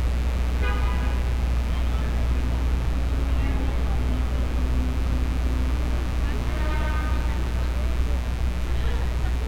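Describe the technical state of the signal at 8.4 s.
At 8.4 s a mains buzz sits under the sound, as it does throughout the clip. Sharp switching spikes on 60 Hz mains, two per cycle, add harmonics reaching several kilohertz. The result is a steady, raspy buzz roughly 20 dB below the sound.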